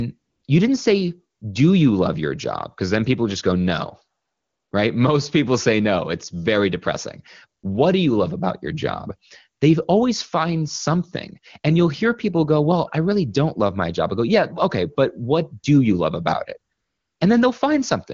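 AMR comfort noise appears at 0.17 to 0.43 s, before "you didn't say do", and at 1.37 to 1.41 s, between "you didn't say" and "do you love your". It returns at 4.21 to 4.71 s, after "people just go no", then at 7.61 to 7.63 s and 16.73 to 17.19 s. In each gap the phone sent no speech frames. The receiver filled the silence with synthetic noise. A smooth, steady hiss replaces the real background and switches in and out.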